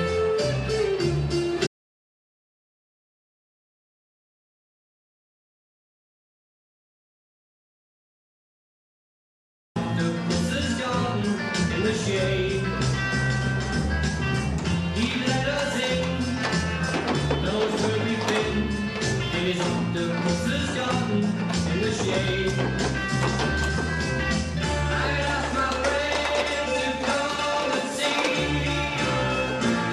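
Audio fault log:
1.67–9.76 s, audio dropout to silence: the sound breaks off abruptly at 1.67 s and the track falls to dead silence, with no room tone or hiss underneath, until it resumes just as suddenly at 9.76 s. Roughly 8.1 s of material is simply absent. The likely cause is a lost input, such as a disconnected device, a failed link or an accidental mute, while the recorder kept writing silence for the whole gap.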